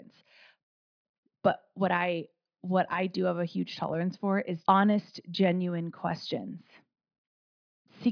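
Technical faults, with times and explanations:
No technical faults detected.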